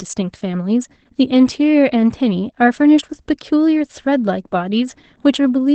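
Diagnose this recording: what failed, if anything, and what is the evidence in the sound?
Opus voice compression runs throughout, a codec-stage fault. Nothing is left above 8.5 kHz, and the speech sounds muffled, hoarse and faintly robotic. That fits wideband SILK coding at a low rate, around 12 kbps, where linear prediction models the voice and the excitation is quantised coarsely.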